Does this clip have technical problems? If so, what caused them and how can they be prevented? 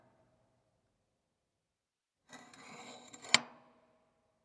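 Yes. Aliasing runs through the whole clip: the sample rate was lowered, in a way that fits a drop from 44.1 kHz to about 22 kHz, without an anti-alias filter first. Everything above the new limit at 11 kHz folded back below it to unrelated frequencies, leaving a gritty, metallic haze about 30 dB under the sound, with energy pressing hard against the 11 kHz band edge. To prevent it, always low-pass filter below half the target rate before resampling.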